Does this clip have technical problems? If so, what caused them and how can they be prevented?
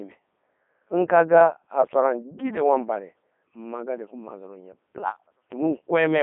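Yes. Throughout, the speech sounds robotic and buzzy and is band-limited to about 200 Hz to 3.6 kHz, the mark of a Codec 2 vocoder, whose sound fits its 3.2 kbit/s mode. Avoid this by recording or sending the speech through a waveform codec at a higher bitrate instead of a low-rate vocoder.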